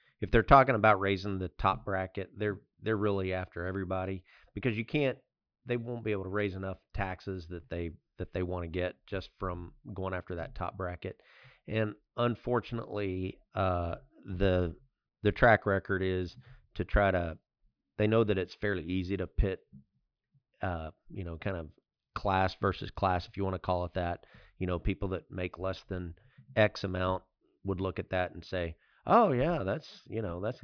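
Nothing stood out as a technical fault anywhere in the recording on listening.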